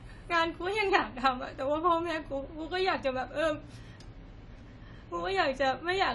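Speech runs the whole clip through audible AAC compression damage. Nothing is present above 11.5 kHz, so the top octave is missing and the sound is dull. Sibilants and sustained vowels carry a smeared, warbling, fizzy texture from coarse spectral quantisation and gaps filled with noise. This is likely AAC-LC encoding at a low bitrate, and the damage fits roughly 32 kbps.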